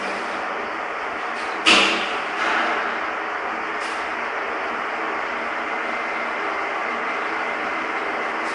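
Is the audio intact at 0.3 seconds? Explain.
No. Throughout the clip, including at 0.3 s, the signal has likely passed through Nellymoser compression: blocks coded with too few bits, with empty bands filled by noise, fitting a bitrate around 44 kbps. This leaves a hissy, smeared halo and nothing above 10.7 kHz.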